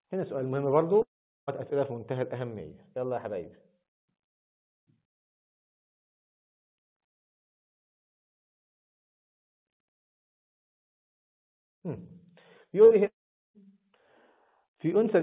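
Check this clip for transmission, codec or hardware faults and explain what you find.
Two kinds of transmission fault are present: two long network dropouts and one burst of packet loss. All of it sits over narrowband audio with nothing above 4 kHz, which fits a G.711-style call codec at 64 kbps.

Long network dropout, from 1.02 to 1.49 s and from 13.07 to 13.60 s. About 0.46 s and then 0.48 s of audio never arrive. The last sound is held briefly and fades. Then roughly 0.4 s of near silence follows in each gap. The audio resumes with that stretch gone. A network outage is the likely cause.

Burst of packet loss, from 12.85 to 12.93 s. About 60 ms of packets were lost or arrived too late. The receiver stretched the previous sound and turned it down across the gap. You hear a brief fading buzz or hiss before the audio jumps ahead.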